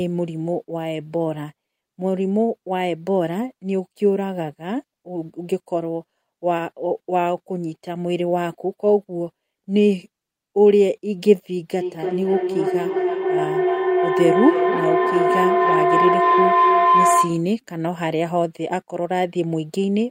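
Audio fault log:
11.79–17.52 s, feedback howl: a microphone-to-loudspeaker loop gains level each pass, swelling into a tone near 1 kHz that pulses roughly every 300 ms and peaks about 4 dB above speech.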